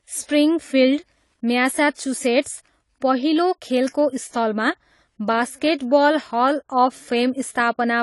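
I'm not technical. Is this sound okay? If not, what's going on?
No. The speech sounds dull and smeared for the whole clip, with a fizzy, warbling edge on hissy sounds and nothing above 11.5 kHz. This is AAC compression damage, most likely from saving or streaming the file at too low a quality setting.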